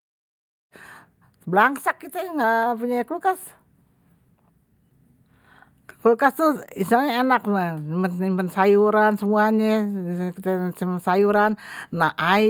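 Nothing technically wrong can be heard in this speech recording. It opens with a smooth fade-in that begins around half a second in and reaches full level at 0.75 s, with no click or hard edge.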